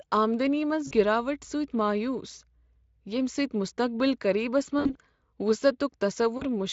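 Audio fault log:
0.87–0.93, 4.79–4.97 and 6.37–6.44 s: VoIP packet loss concealed by the speech codec. After "آمدنی منٛز", 40 ms is lost. After "مستقبل قریبس", 100 ms is lost, scattered over 160 ms. The last gap is 40 ms. The decoder repeats its last pitch and filter at falling gain, so speech smears into a fading buzz or coloured noise. On a spectrogram this shows as frozen, blurred harmonics, and on the waveform as a shrinking envelope.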